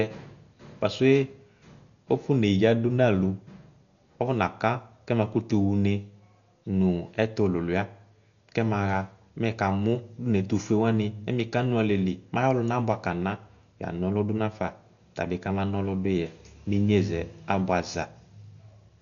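Speech, heavily damaged throughout by what is likely Dolby Digital compression: nothing remains above 6.9 kHz, so it sounds dull, and empty frequency lines filled with dither noise give a rough, fluttering texture around voiced tones, consistent with a starved bitrate near 48 kbps.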